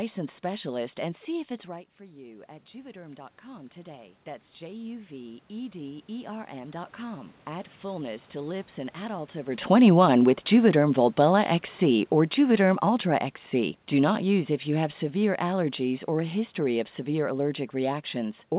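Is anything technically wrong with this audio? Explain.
Yes. From 1.63 s to 9.3 s, just after "specialist and see if", the sound gets louder over several seconds, with the room noise swelling along with the speech. This is automatic gain rising. The level at the microphone dropped by about 17 dB, probably as the talker moved back around 1.5 s. The gain control responded by slowly adding about 13 dB, so the background is lifted by the same amount as the speech.

From 9.58 s to 17.39 s the opposite happens. The speech starts loud and then sinks gradually, and the room noise sinks with it. This is automatic gain falling. The talker appears to come closer around 9.5 s, and the gain control reacts to the louder input by easing its gain down by about 10 dB over several seconds. The background drops by the same amount as the speech, which gives the steady fade away. The audio also passes through a G.711 mu-law call path, and nothing above 4 kHz survives it.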